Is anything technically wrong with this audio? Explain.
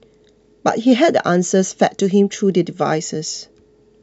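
No, nothing technically wrong stood out on listening to this speech clip.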